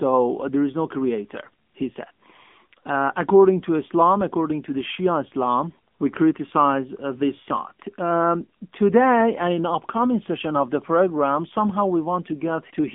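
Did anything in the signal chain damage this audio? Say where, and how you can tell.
Yes. The codec stage did, across the whole clip: AMR narrowband mobile codec damage. Nothing passes above about 3.6 kHz, and the band sits near 200 Hz to 3.5 kHz. The speech sounds buzzy and synthetic, which points to a low bitrate mode around 8 kbps.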